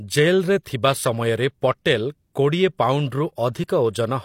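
Pre-echo appears from 0.63 to 0.66 s, a brief smear of hiss running about 26 ms ahead of a sharp onset in the speech. The transform codec spread its quantisation noise across the whole block containing that attack, so noise scaled to the loud transient also filled the quiet instant before it. The result is a rushing sound just before the onset, which makes the attack itself sound blunted and less crisp.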